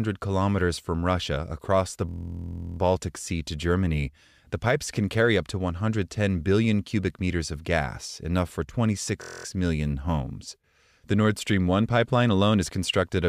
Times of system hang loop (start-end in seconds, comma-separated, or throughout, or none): 2.09-2.79, 9.22-9.45